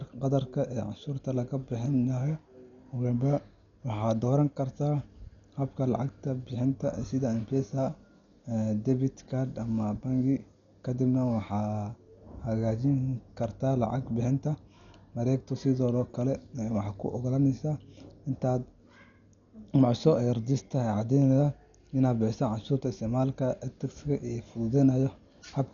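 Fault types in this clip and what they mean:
Dolby Digital compression: The speech sounds dull, with nothing above 7 kHz and rough, fluttering noise throughout. Likely a heavily starved encode, fitting about 48 kbps.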